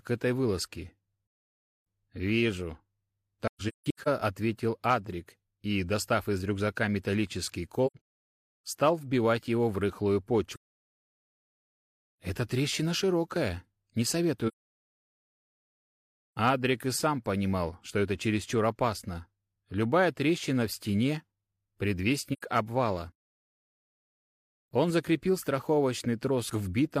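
At 3.47 to 4.08 s, 7.86 to 8.05 s, 10.54 to 10.80 s, 14.47 to 15.31 s and 22.33 to 22.42 s the audio drops out with AAC frame loss and muting. The decoder zeroes the spectrum of each missing frame, so the overlapping windows fade the sound down and back up. The result is soft-edged holes. The first two stretches break up into several short gaps, with runs of up to about 150 ms.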